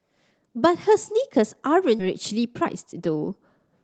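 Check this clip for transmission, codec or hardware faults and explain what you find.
Two transmission faults are audible, heard through a call codec that cuts everything above 8 kHz.

Skip ahead at about 2.0 s: a stretch of speech was dropped while later audio was already queued, and the two sides were joined directly, so roughly 0.7 s of speech vanishes without any gap.

Jitter buffer speed-up from 2.31 to 3.83 s: with too much audio queued, the receiver repeatedly removed short pitch-period pieces. Speech runs about 117% fast at unchanged pitch, sounding hurried.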